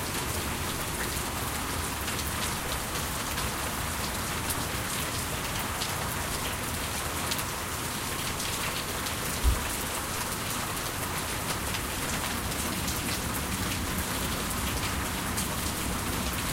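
Nothing in this recording of everyday sounds gives any sign of a technical fault, so there's nothing here to flag.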